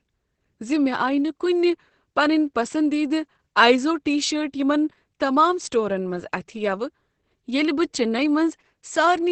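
From start to finish the speech carries Opus voice compression in its linear-prediction (SILK) mode. Nothing survives above about 8.6 kHz, the wideband ceiling, and the excitation is coded so coarsely that the speech sounds muffled, hoarse and faintly robotic, which fits a bitrate near 10 kbps. A simple low-pass filter would only dull the top, but this roughens the sound itself. It also leaves none of the swirling, watery high-frequency artefacts that transform codecs produce.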